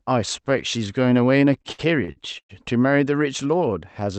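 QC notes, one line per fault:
1.53–2.51 s, repeated stalls (stutter): six late-packet gaps, longest about 109 ms, filled by stretching the last sound; nothing lost, unlike dropouts, so speech drags and stutters.
3.68–4.19 s, jitter buffer slow-down: pitch periods repeated to rebuild the buffer, adding 48 ms; speech runs at 92% speed, pitch unchanged, drawn out rather than broken.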